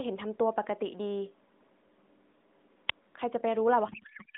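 At 2.88 to 2.92 s there is a wireless microphone squelch dropout. The FM radio link fades. The receiver's squelch shuts the output for about 21 ms. A brief lift of hiss leads into a short hole of near silence. Then the speech comes back.

From 3.88 s to the end at 4.37 s comes a codec payload misread. The AMR decoder unpacks frames with their fields in the wrong places. This fits octet-aligned packing being read as bandwidth-efficient. The speech turns into garbled warble and noise that barely tracks it. Before this, the narrowband AMR-NB line passes roughly 200 Hz to 3.7 kHz with light coding damage, which fits the 12.2 kbps mode.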